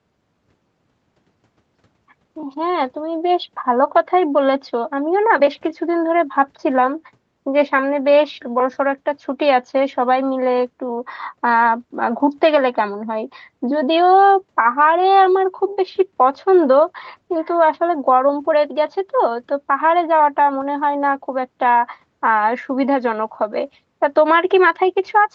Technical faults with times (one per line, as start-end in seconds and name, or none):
none